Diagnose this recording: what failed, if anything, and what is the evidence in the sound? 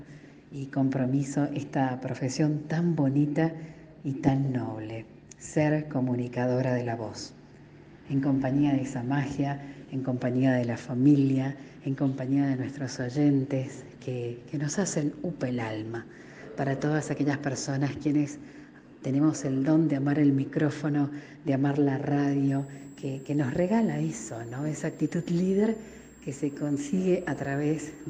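A switching supply whistle in the analogue power and wiring stage starts at 22.48 s and runs to the end: a thin high tone wandering between 7.18 and 7.78 kHz, roughly 35 dB below the signal. A supply cycling in audible burst mode explains it. Mains hum sits low and steady, not drifting this high.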